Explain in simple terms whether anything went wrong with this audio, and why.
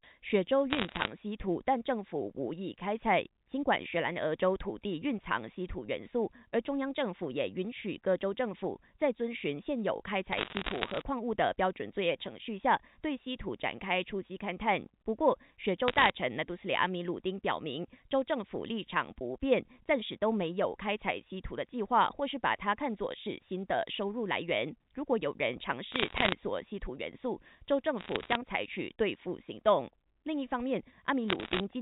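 Yes: there are bursts of crackle at 0.70–1.1, 10.32–11.02, 15.88–16.10, 25.92–26.33, 27.98–28.35 and 31.28–31.60 s. These are bit errors on a digital phone line. Roughly one bit in a hundred flipped, so single samples jump into sharp ticks. Unlike dropouts, the speech never gaps or stutters.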